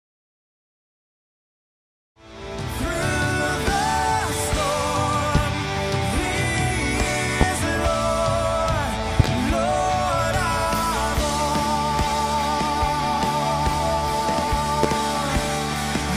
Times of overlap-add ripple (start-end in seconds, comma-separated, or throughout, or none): none